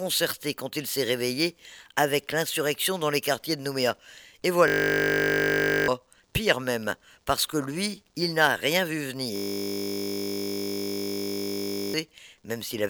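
At 4.68–5.88 s and again at 9.36–11.94 s there's a system hang loop: a frozen system replaying a 20 ms buffer, giving a steady 50 Hz buzz.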